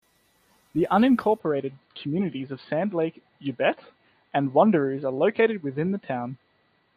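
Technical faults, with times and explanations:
1.39–6.96 s, input switched to a poorer device: from 1.39 s the speech goes dull and boxy with nothing above 4.6 kHz, no gap and no real level jump, plus a faint new background noise about 50 dB down. Most likely the system hopped to a narrower-band microphone.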